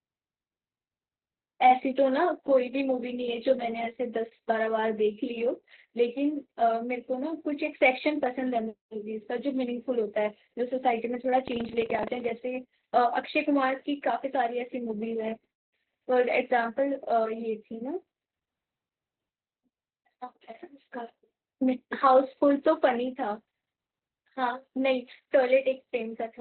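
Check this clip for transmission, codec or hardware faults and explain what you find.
The speech carries one fault, and it runs the whole clip: Opus voice compression at a very low rate. The band stops near 4.2 kHz, so only the narrowband SILK coder is at work. Its linear-prediction model rebuilds the voice from a coarsely coded excitation, which fits a bitrate around 8 kbps. The speech sounds muffled and hoarse, with a faint robotic edge. The codec damage is heavy.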